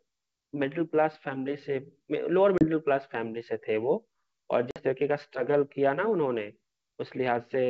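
At 2.58 s and again at 4.71 s, packet loss on an ADPCM call cuts hard-edged gaps of about 30 ms and 50 ms, each a few packets. The G.722 decoder's predictor and step size lose step, so the speech returns slightly distorted before settling. A waveform shows a flat-line hole, and a spectrogram shows a blank column.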